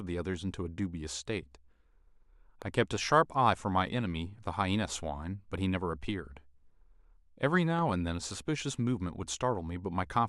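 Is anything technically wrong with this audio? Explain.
Yes, there are two loud pops, at 2.62 to 2.64 s and 7.79 to 7.81 s. A sudden voltage pulse, likely from a plug, switch or static discharge, entered the chain and was shaped by the following circuits. Each gives a single sharp pop a few dB above the speech, which continues underneath.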